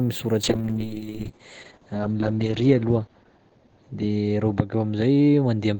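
Call bitrate drop from 0.44 s onward: coarse coding that fits roughly 8 kbps and a cut-off at 8 kHz leave the speech muffled and watery.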